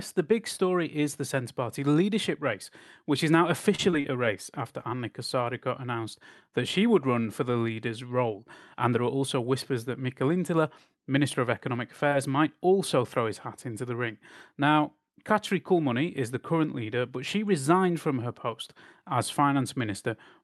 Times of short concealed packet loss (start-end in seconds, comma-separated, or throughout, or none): 12.10-12.13